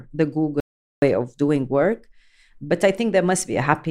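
An audio dropout to silence affects this speech clip: the input was likely lost for a moment, leaving only silence. Speech stops abruptly at 0.60 s and resumes at 1.02 s, and the 0.42 s gap is dead silence with no room tone.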